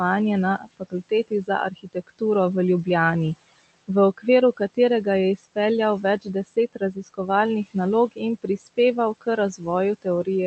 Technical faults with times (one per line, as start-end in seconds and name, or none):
0.00-10.46 noise suppressor artifacts
0.58-2.22 speech cut by the noise suppressor
3.88-4.26 speech cut by the noise suppressor
5.37-5.57 speech cut by the noise suppressor
6.03-7.19 speech cut by the noise suppressor
8.12-8.78 speech cut by the noise suppressor